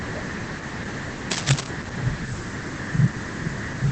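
Throughout the speech, Opus voice compression is plainly audible: nothing sounds above 8.6 kHz, and the voice is muffled, hoarse and faintly robotic. This points to the SILK speech coder at about 12 kbps. A simple low-pass filter would dull the voice without that coarse, synthetic grain.

From 1.31 to 1.67 s, cable scratch noise sits over the speech as dense, uneven rustling, roughly as loud as the voice itself. The likely cause is a worn cable or connector being moved. It is a continuous scratchy burst rather than isolated clicks or a dropout.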